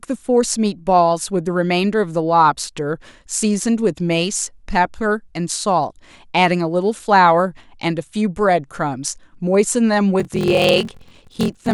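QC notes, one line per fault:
10.18–11.73 s, block size mismatch (padded): the sound takes on a buzz at about 43.1 Hz and runs slower by a factor of 0.861 at roughly normal pitch. This fits a stage reading 1024-sample blocks while receiving shorter ones, with each block's shortfall filled by silence.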